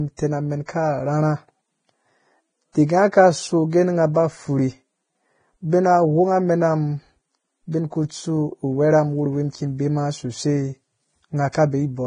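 From start to finish the speech carries heavy Vorbis compression damage, likely from a low-bitrate encode, and the grain fits a rate of around 21.5 kbps. The top of the spectrum is cut, with nothing above 9.7 kHz. Below that, the treble has been quantised so coarsely that its fine structure comes through as hiss-like noise of similar energy. The speech sounds grainy, voiced tones take on a rough texture, and onsets are smeared rather than crisp.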